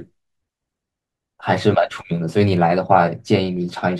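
From 0.57 to 3.57 s there's a tick about every 1.0 s, around four in all, most likely clock drift buffer slips from two clocks a few hundred ppm apart.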